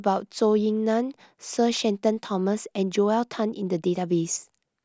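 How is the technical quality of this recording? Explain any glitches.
The technical quality of this recording is good, and there are no glitches to explain.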